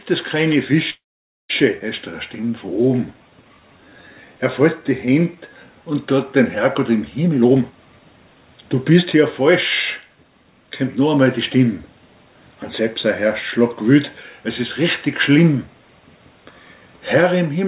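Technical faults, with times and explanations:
0.90–1.51 s, call audio freeze: the sound stalls for about 0.6 s. The last bit of audio gets dragged out as a fading buzz for a moment, then there's roughly half a second of dead silence before things pick up exactly where they stopped. Nothing seems to be lost; it's a gap pushed into the stream. The likely cause is packets getting held up in transit until the jitter buffer ran dry and the receiver had nothing real to play.
1.79–1.82 s, skip ahead: right after the stall recovers, playback jumps forward. There's only a tiny join of a few milliseconds, but about a third of a second of audio has gone missing, so the two sides butt up against each other almost directly. A stretch of audio was dropped, either in transit or by an overflowing jitter buffer, which claws back about half of the delay the freeze just added.
2.41–4.38 s and 4.82–5.55 s, jitter buffer slow-down: two stretches where things drag. 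The first plays at about 87% speed and adds 257 ms; the second runs at about 89% and adds 86 ms. The pitch stays put while sounds get drawn out, with a faint warble here and there. The buffer was running low or had just raised its target delay, so it repeated single pitch periods and slivers of pause, over and over, to rebuild its cushion.
7.24–9.49 s and 10.02–11.39 s, jitter buffer speed-up: the opposite move. The first stretch runs at 120% and trims about half a second; the second runs at 110% and trims around 150 ms. Pitch is unchanged, but the sound comes across rushed. The buffer had more audio queued than it wanted, so it kept cutting out short pieces of a pitch period or two to bring the delay back down. Through all of this you can hear the G.711 path's narrowband character, with nothing above 4 kHz.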